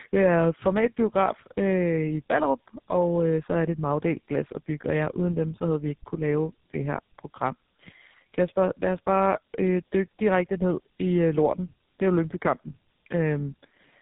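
Across the whole speech clip, the call passed through two low-rate speech coders in a row, tandem speech coding. The character fits AMR-NB at 6.7 kbit/s decoded to a G.711 link and then re-encoded as GSM full rate. The second coder has to model the first one's already distorted output, so errors stack. The voice sounds rough, muffled and warbly, with nothing above 3.8 kHz.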